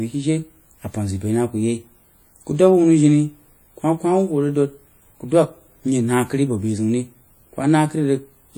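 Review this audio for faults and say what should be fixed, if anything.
The encoder has likely squeezed this speech through WMA compression at a low bitrate, with artefacts present from start to finish. Long transform blocks smear quantisation noise across tens of milliseconds around each syllable, and weaker spectral detail is dropped, which fits a stream of about 48 kbps. The result is plainly audible: a ringing, washy texture with hiss that swells and fades with the speech. To prevent it, encode at a higher bitrate or keep a lossless master and transcode only once.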